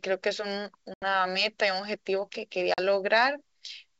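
Speech carried over G.722 wideband coding at 64 kbit/s shows packet loss on an ADPCM call: hard-edged silent holes at 0.94–1.03 s (80 ms lost, a few packets) and 2.74–2.79 s (40 ms). Unlike a plain dropout, each resumes slightly distorted while the decoder's predictor resynchronises.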